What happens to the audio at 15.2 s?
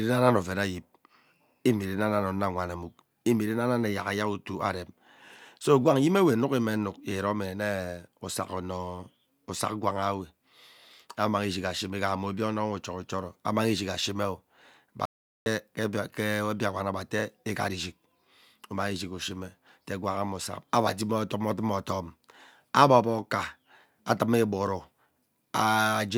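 At 15.2 s the speech cuts out completely: from 15.05 s to 15.46 s the signal falls to dead silence, with no room tone or background hiss underneath, and then the speech resumes abruptly mid-flow. This is an audio dropout to silence lasting about 0.41 s. The likely cause is a momentary loss of the input, such as a link failure or brief disconnection, while recording carried on writing silence. Whatever was spoken during that gap is unrecoverable.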